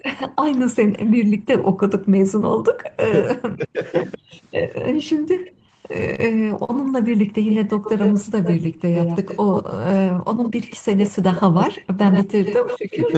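Speech carried over an Opus call path, band-limited to 8 kHz. Background gated by the echo canceller cuts the room sound by about 40 dB from 0.28 to 2.64 s and from 5.69 to 7.37 s, by about 35 dB at 8.73 to 8.85 s, and by about 16 dB at 10.38 to 10.43 s. Speech suppressed in double talk dips the voice by roughly 40 dB from 2.93 to 5.41 s and from 9.66 to 10.10 s, and by roughly 30 dB from 12.12 s to the end. Both sides were likely talking at once. An echo leak runs from 5.45 s to the end. A delayed copy of the voice trails by 109 ms, only about 5 dB below the speech. A loudspeaker echo slipping past the far end's canceller is the likely cause. Two short stalls from late packets hold the sound briefly, at 6.15 to 6.20 s and at 6.64 to 6.71 s. The receiver stretched 30 ms and 42 ms of audio while waiting, and nothing is lost.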